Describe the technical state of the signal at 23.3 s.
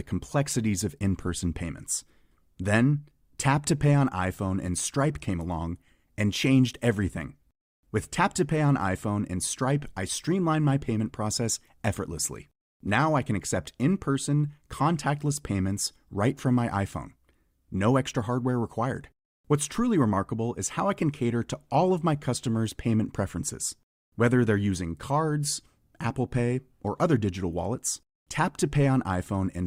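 At 23.3 s the speech signal is intact, with no audible technical fault at that moment.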